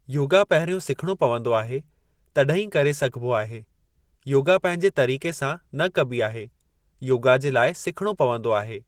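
From start to finish the speech carries plainly audible damage from likely Opus compression. It sounds muffled and hoarse, with a grainy roughness on voiced sounds, the character of Opus's hybrid speech mode at a starved rate, consistent with a bitrate around 16 kbps. On a spectrogram the energy still reaches up to about 20.3 kHz with few gaps, but the upper bands look smeared and noise-filled rather than showing crisp harmonic detail.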